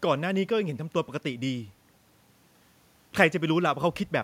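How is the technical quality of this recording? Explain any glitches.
No glitches are audible in the speech; the faint room noise, about 42 dB below it, belongs to the recording space rather than the system.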